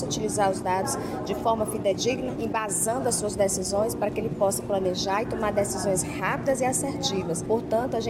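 Right around 1.91 to 1.93 s there's a case of compressed frames skipped: a frame or so never got decoded, so the audio jumps ahead by roughly 20 ms.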